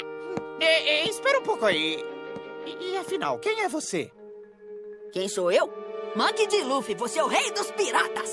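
No technical faults are audible.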